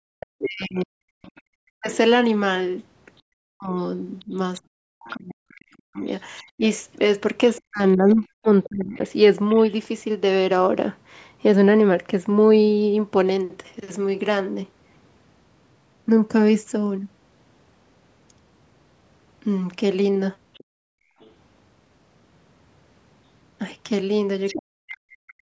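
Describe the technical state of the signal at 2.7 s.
At 2.7 s the speech falls inside a stretch of speech suppressed in double talk, from 0.0 to 8.98 s. The level drops sharply, by about 40 dB at its deepest. Around four seconds of that span are affected in total. The likely cause is an echo canceller that could not separate the near talker from loudspeaker echo while both sides spoke. It turned both down together.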